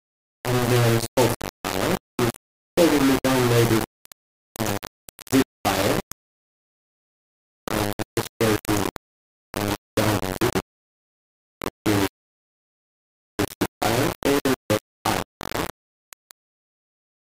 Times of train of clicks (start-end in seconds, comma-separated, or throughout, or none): none